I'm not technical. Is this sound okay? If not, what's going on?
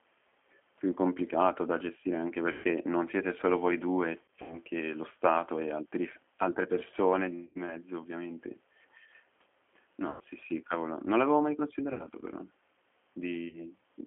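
No. The whole clip sounds thin, slightly rough and robotic. That is the G.729 codec, a phone-call compression that rebuilds speech from a simplified model and cuts the higher frequencies.

At 2.52, 4.22 to 4.58, 7.45, 10.10, 11.93 and 13.49 seconds, the sound briefly smears into a buzzy tone or a noise that fades. That is VoIP packet loss concealed by the speech codec: pieces of the call went missing, and the decoder filled each gap by guessing from the sound just before it.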